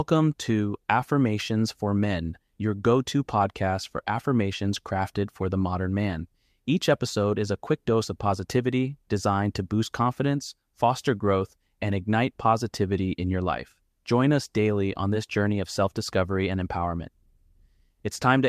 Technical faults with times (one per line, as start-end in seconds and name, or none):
none